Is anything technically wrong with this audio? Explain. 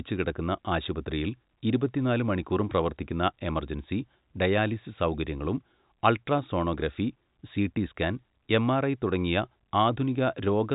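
No, nothing technically wrong can be heard here.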